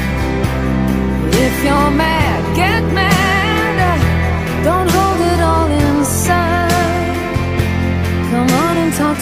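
The first 4 seconds are the giveaway: it's an adaptive stream starting at a low bitrate, with dull or synthetic-sounding treble and heavier codec smearing, which fits Opus at about 32 kbit/s. At 4.0 s it jumps cleanly, no gap, to a fuller sound consistent with about 64 kbit/s.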